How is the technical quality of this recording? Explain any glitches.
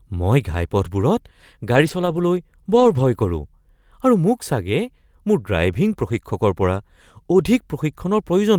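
The speech is marred by three stretches of lost packets rebuilt from error correction, at 1.73 to 2.19 s, 2.75 to 3.05 s and 6.09 to 6.19 s. In each, packets were lost and the decoder played the low-bitrate backup copies carried in the following packets, so there is no gap, but those stretches sound rougher and noisier.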